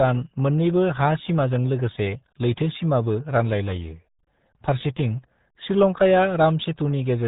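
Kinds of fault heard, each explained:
RealAudio 14.4 codec: the whole clip has gone through the old dial-up-era speech codec, and the damage is heavy. Nothing gets past about 3.8 kHz, so the speech sounds boxed-in and muffled, with that gargly, bubbling texture you'd expect from squeezing it down to something like 8 kbit/s.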